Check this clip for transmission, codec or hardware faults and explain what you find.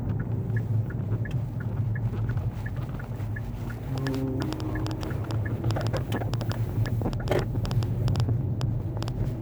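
One hardware-type fault is present: a train of clicks.

From 3.98 s to 9.09 s, a sharp, repeated ticking sits on top of the audio, about 5.7 clicks per second at an uneven pace, around 30 in all. The clicks share much the same shape and stand out clearly, peaking roughly 15 dB above the underlying sound. The likely cause is an external pulse source, such as interference from nearby equipment or a faulty connection or power supply, injecting brief spikes into the signal path.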